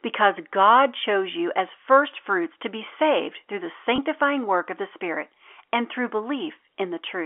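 A speech clip carried over a telephone line with G.711 coding, so the sound is limited to roughly 300 Hz to 3.4 kHz. There is one fault, packet loss with pitch repetition, from 3.96 to 3.98 s. About 20 ms of audio is missing, which fits a single lost packet. The receiver fills the gap by repeating the last pitch period. The result is a brief, slightly held, buzzy tone before the speech resumes.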